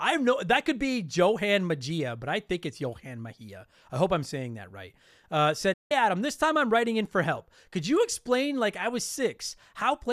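At 5.73 s the speech drops out abruptly, fading to silence in about 8 ms and returning at 5.91 s. This is a digital broadcast dropout: the receiver muted on corrupted or missing frames, losing roughly 168 ms of programme, which points to several consecutive bad frames.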